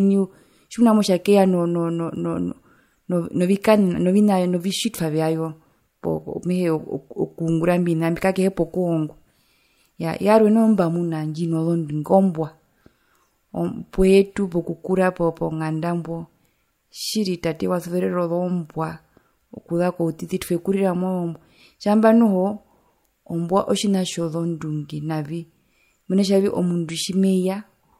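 Nothing stood out on listening to this speech recording.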